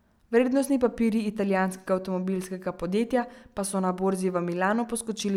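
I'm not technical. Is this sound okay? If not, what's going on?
Yes, this sound is okay, and nothing is going on that needs fixing.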